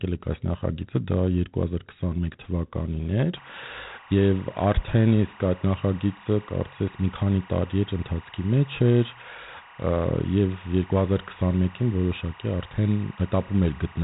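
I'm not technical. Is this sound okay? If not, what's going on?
No. The whole recording has a rough, rasping hiss riding on the speech, getting louder as the speech does, and it sounds muffled because nothing above 3.8 kHz comes through. That is G.726 ADPCM damage: a telephone-style coding that saves space by storing rough corrections to its own guesses, squeezed hard here.

From 3.37 s to the end, there is also a steady chirping warble behind the speech, flipping between tones around 1 and 2 kHz. That is timecode bleed, a timing signal from a nearby track or cable leaking into the audio.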